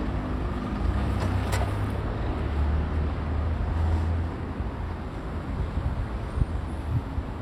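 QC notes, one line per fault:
2.05–2.10 s and 4.97–5.02 s, compressed frames skipped: the decoder dropped whole compressed frames, either missing from the file or rejected as damaged, so playback leaps forward. The first jump loses roughly 100 ms and the second roughly 200 ms, which points to about two and four frames of 46.4 ms each. At each join the audio lurches ahead.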